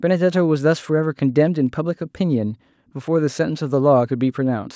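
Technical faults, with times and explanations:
No technical faults can be heard in this speech.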